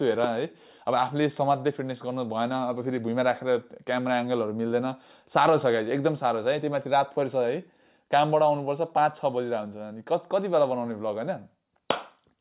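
No technical faults are audible anywhere in this audio.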